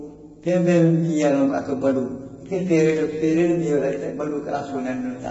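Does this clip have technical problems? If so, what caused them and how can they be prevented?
Yes. Throughout the speech the sound is rough and grainy, with noise filling the gaps between harmonics and nothing above 7.7 kHz, which points to low-delay AAC compression, likely AAC-ELD at a bitrate around 16 kbps. Its short frames resolve pitch harmonics poorly and use bits less efficiently, so at this rate the harmonic structure smears. A clean band limit from a low sample rate would leave harmonics crisp; here the graininess is spread through the whole band that remains. To prevent it, raise the call bitrate well above 16 kbps, or use a codec built for low-bitrate speech.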